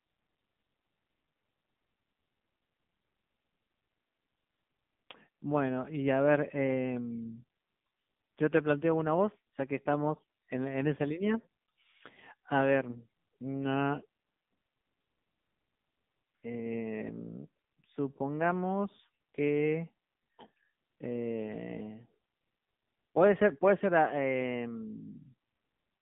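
Throughout, the speech carries the AMR narrowband mobile codec sound: a band of 150 Hz to 3.7 kHz and heavy, buzzy, synthetic coloration, which fits a low mode near 6.7 kbps. A spectrogram shows a hard ceiling at 3.7 kHz and blurred harmonics.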